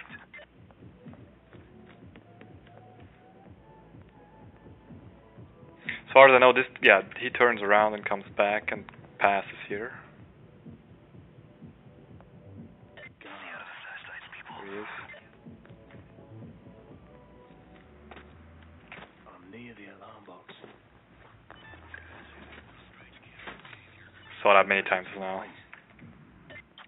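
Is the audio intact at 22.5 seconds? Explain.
Yes, the audio is intact at 22.5 seconds, with no dropout, click, distortion or other fault at that moment.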